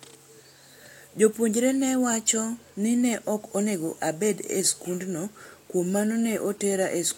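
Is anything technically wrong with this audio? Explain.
No, nothing technically wrong can be heard in this speech recording. There is no fault to point to anywhere in the clip.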